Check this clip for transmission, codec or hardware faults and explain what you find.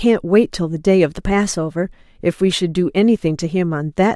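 One fault stands out: a drift correction step in the speech from 1.09 to 1.85 s. Over those 0.76 s the audio runs about 5.9% fast, raising pitch by almost exactly a semitone (99 cents), then returns to normal. The likely cause is clock-matching software briefly speeding playback to drain its buffer. Speed and pitch rise together and hold steady for that span, unlike the slow, continuous wavering of wow or flutter.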